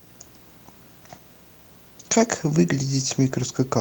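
Video or display buzz runs through the whole speech clip. A screen or video cable is coupling into the audio path, so the picture's timing signals leak in as sound. The main component is a buzz at the 59.94 Hz field rate, carrying a gritty hash of harmonics above it, sitting roughly 30 dB below the speech. Over it lies a thin, very high whine at 15.7 kHz, the line rate of the video scan.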